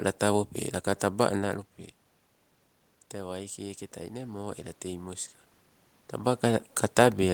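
From 3.13 to 4.57 s there is automatic gain rising. The input dropped by about 12 dB, so the gain control raised its level by about 4 dB over that stretch. The speech and the room noise beneath it swell together just before "ela tei moska".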